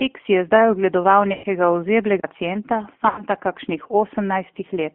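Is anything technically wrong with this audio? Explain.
Yes. The speech carries G.729 codec damage throughout, plus two bursts of VoIP packet loss concealed by the speech codec.

G.729 codec: The whole clip is limited to a 200 Hz to 3.4 kHz line band. The low-rate vocal tract model rebuilds the voice, which sounds plainly rough and synthetic, fitting an 8 kbit/s link.

Packet loss concealment: At 1.33 to 1.46 s and 3.08 to 3.25 s, roughly 110 ms and 100 ms of audio are missing. The decoder extrapolates its last pitch and filter with falling gain, producing a buzzy or noisy, fading smear in place of the speech.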